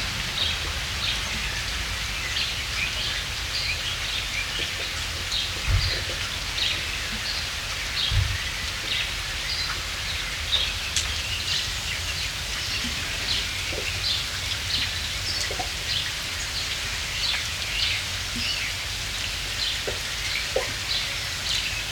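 From 0 to 11.25 s the audio has a wrong sample rate fault. It plays at 0.919 times its proper speed, dropping about 1.47 semitones, so the sound is slower and lower together. That ratio fits 48 kHz material played at 44.1 kHz without conversion.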